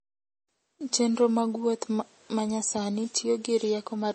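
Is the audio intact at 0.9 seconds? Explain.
No. At 0.9 seconds the speech carries MP3 compression damage, and it runs through the whole clip. Nothing is heard above 8.4 kHz, so the top end sounds dull. Weak frequency detail flickers on and off between frames, which gives a watery, swirling texture. Sibilants turn metallic and attacks smear. The cause is likely an encoder short of bits, cutting the treble and dropping quiet components, which fits a low bitrate around 32 kbps.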